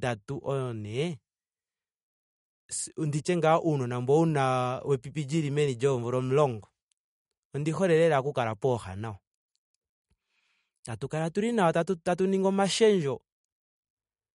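Throughout the speech, likely MP3 compression at a low bitrate, plausibly around 48 kbps, plainly damages the sound. Weak frequency lines drop in and out between frames, giving a watery quality, and a spectrogram shows patchy, flickering holes under a hard ceiling with nothing above 11.2 kHz.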